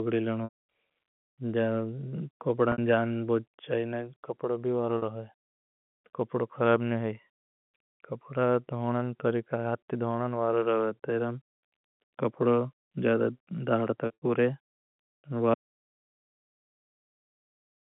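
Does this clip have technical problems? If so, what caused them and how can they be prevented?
Yes. Packet loss with pitch repetition occurs at 0.44 to 0.57 s (160 ms lost), 2.72 to 2.78 s (60 ms), 4.98 to 5.02 s (40 ms) and 14.06 to 14.22 s (120 ms scattered over 160 ms). Each gap is bridged by repeating the last pitch period, which gives a brief buzzy hold. The longer gaps fade to silence, and the 40 ms gap points to 20 ms packets. Reducing network jitter and loss, through QoS priority, a larger jitter buffer or forward error correction, would prevent it.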